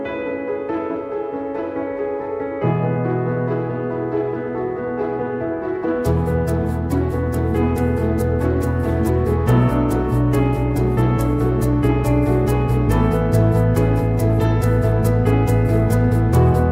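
Nothing here catches the ear as a technical problem; the audio just runs along without anything going wrong.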